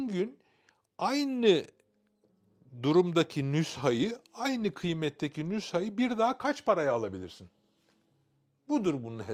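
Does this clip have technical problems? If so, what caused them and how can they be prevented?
No, no technical faults detected.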